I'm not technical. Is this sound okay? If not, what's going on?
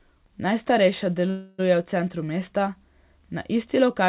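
No. At 1.30 s the speech stalls for about 0.3 s, a call audio freeze. Sound stretches into a fading buzz, then resumes with "v centru mesta". The likely cause is delayed network packets. Nothing is lost; the speech just arrives late.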